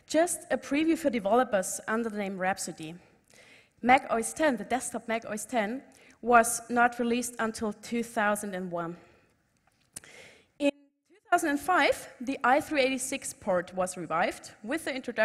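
At 10.70 s the sound drops out abruptly until 11.32 s, a gap of about 0.62 s. This is an audio dropout to a faint residue. Only a faint trace remains, roughly 35 dB down. The signal was likely lost upstream while the path stayed live.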